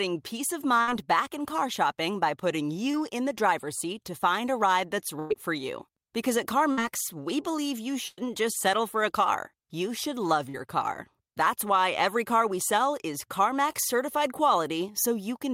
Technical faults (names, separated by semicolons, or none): burst of packet loss; short concealed packet loss